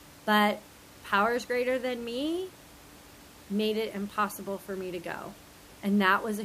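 Nothing stood out on listening to this speech recording, and the faint room noise about 23 dB below the speech belongs to the recording itself rather than to the system.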